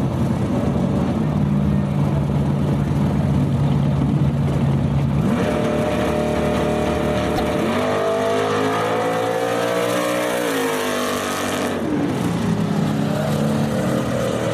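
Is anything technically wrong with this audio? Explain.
Yes, there's one glitch. Around 7.36 to 7.40 s a corrupt frame got decoded anyway: flipped bits scatter energy to wrong frequencies, giving a fairly loud, brief chirp, squeak or burst of noise, roughly one frame long.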